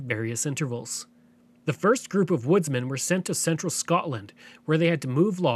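Nothing in this bit of speech stands out as a technical fault; you can just listen through it without anything catching your ear.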